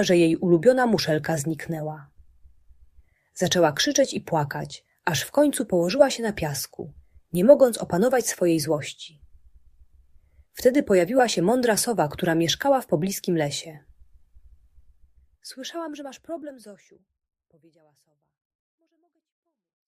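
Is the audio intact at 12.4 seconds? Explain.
Yes, the audio is intact at 12.4 seconds, with no fault at that moment.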